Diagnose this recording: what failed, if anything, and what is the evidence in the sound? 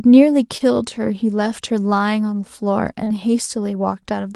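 Short concealed packet loss occurs twice in this speech, at 0.57 to 0.62 s and again at 3.04 to 3.08 s, a network-stage failure. Each time about 20 ms of audio failed to arrive in time, which fits a single lost packet, and the receiver's concealment bridged the gap by extending the preceding sound for roughly 22 to 25 ms before blending back into the real signal. The result is a brief smear or wobble at each point.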